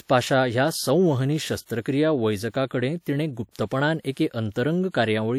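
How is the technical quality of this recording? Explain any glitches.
The recording has one audible glitch, a pre-echo from 3.51 to 3.55 s. The transform codec spread quantisation noise across its block, so noise sized for a sharp speech attack leaks about 43 ms ahead, heard as brief hiss softening the onset. A spectrogram shows faint broadband haze before the attack's vertical edge, and the waveform shows low-level fuzz preceding the transient.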